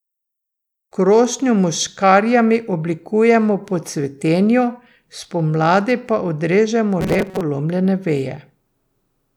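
Robotic sound from repeated short buffers, 7.01 to 7.41 s: the speech becomes a rigid 188 Hz buzz, likely a 5.3 ms block replayed over about half the audio.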